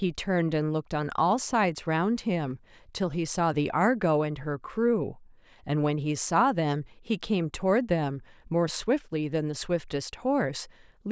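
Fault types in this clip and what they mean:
Listening through the speech, nothing stood out as a technical problem at any point.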